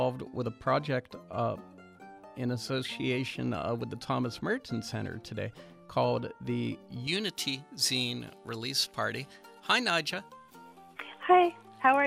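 From 7.07 s to the end, pre-emphasis is left on: the treble was boosted for transmission and the matching de-emphasis was never applied. High frequencies sit about 11 dB too strong at 10 kHz relative to 1 kHz, a tilt that fits the J.17 curve. The sound turns thin, bright and hissy. On a spectrogram the upper bands brighten abruptly at 7.07 s, and the waveform shows sharper, spikier transients.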